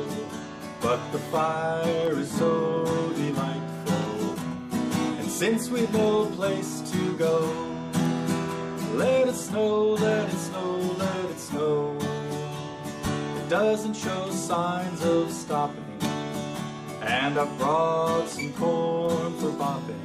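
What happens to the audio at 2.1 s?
A single sharp loud pop from 2.07 to 2.10 s, about 10 dB above the sound, likely a brief voltage pulse added to the signal.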